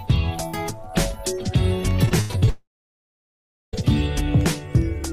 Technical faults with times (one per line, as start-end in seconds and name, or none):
2.05-2.49 repeated packet loss (robotic sound)
2.49-3.75 long network dropout